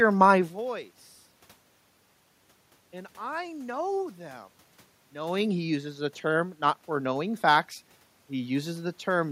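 Nothing here points to a system fault: the background noise is just the room itself, and the level shifts near the half-second mark and again around 5 s are simply the talker moving relative to the microphone.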